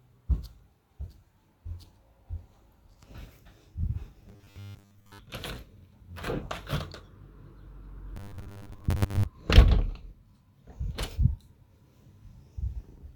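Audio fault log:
4.29–5.19 s and 8.17–9.26 s, robotic sound from repeated short buffers: in both stretches the audio collapses into a stiff, metallic buzz pitched at 100 Hz that only loosely tracks the underlying sound. That's likely a stream starving for data, with the player looping the last 10 ms or so to cover the gaps. Most of the real audio in those spans gets skipped, and the fixed 10 ms repeat imposes its own 100 Hz tone.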